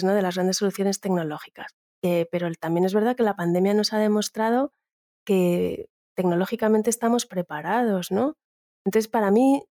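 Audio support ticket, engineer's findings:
No faults found in clip.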